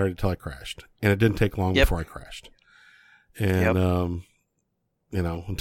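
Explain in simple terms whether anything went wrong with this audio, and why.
Nothing went wrong; no technical faults can be heard here.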